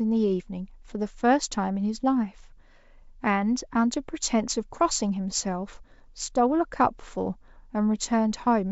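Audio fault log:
No faults are heard in this speech clip. It is carried by G.722 wideband telephone coding at 64 kbit/s, which keeps speech clear up to about 7 kHz and leaves at most a faint hiss in the upper band.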